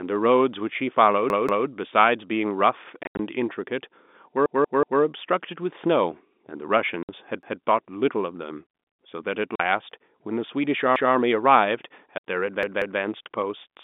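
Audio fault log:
1.30 to 13.00 s, repeated buffer: a 186 ms stretch replays with a hard join, twice at 1.30–1.67, three times at 4.46–5.02, once at 7.43–7.62, once at 10.96–11.15 and twice at 12.63–13.00. Each stutter comes from late audio forcing the device to replay its last buffer, which fits an 8192-sample buffer. Nothing is skipped, so the sound resumes where it left off.
3.03 to 12.22 s, packet loss filled with silence: abrupt hard-edged dropouts cut the narrow telephone-band audio. About 120 ms go missing in pieces across 3.03–3.19, with the longest gap 80 ms. Further gaps are 60 ms at 7.03, 40 ms at 9.56 and 60 ms at 12.18. Lost packets were replaced with silence, and the gap lengths fit 20 ms packets.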